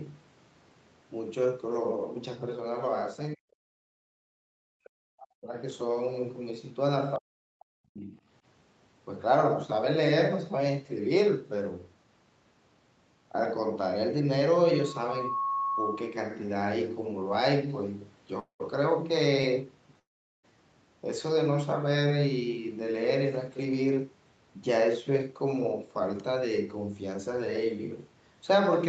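From 3.35 to 3.56 s, again from 4.3 to 5.57 s, and from 7.19 to 8.15 s, the speech dips sharply, sometimes by around 40 dB, and breaks into pieces. The likely cause is speech suppressed in double talk: with both ends talking at once, the echo canceller could not tell this talker from the loudspeaker echo, so it turned everything down. In the waveform the envelope collapses in ragged chunks, and on a spectrogram the harmonics thin out and the upper bands vanish first.

Between those events, at 3.84 to 4.02 s, the background is gated by the echo canceller. While the far end played, the canceller clamped the microphone down by about 34 dB for roughly a fifth of a second. The room noise drops out briefly and then comes back. The waveform shows a flat notch in the noise floor, and the spectrogram shows a short vertical band of near-black across the whole range.

At 18.39 to 18.62 s and 19.99 to 20.45 s the sound stops and resumes exactly where it left off, with nothing skipped. 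A call audio freeze is the likely cause: late packets drained the jitter buffer, and the receiver stretched the last sound into a fading buzz before falling silent. That inserts 203 ms with about 120 ms of silence, then 442 ms with about 420 ms of silence. On the display, a smeared, fading tail runs into an empty gap.

At 19.42 s, a short stall from a late packet holds one sound 15 ms too long. The receiver briefly stretched the last sound until the packet arrived, which leaves a faint buzzy hitch. On a spectrogram it shows as a tiny horizontal smear, and in the waveform as a brief repeated cycle.

From 22.69 to 24.01 s, 24.58 to 25.54 s and 26.28 to 27.66 s, the jitter buffer speed-up makes the speech run 107%, 105% and 107% fast at unchanged pitch. Excess buffered delay was trimmed by cutting out pitch-period slices, roughly a tenth, a twentieth and a tenth of a second in total. The talking sounds slightly hurried. 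The harmonic lines stay level on the spectrogram, but syllables sit closer together, and the waveform shows faint joins.

Throughout the clip, the Opus call path and the microphone processing leave nothing above 8 kHz.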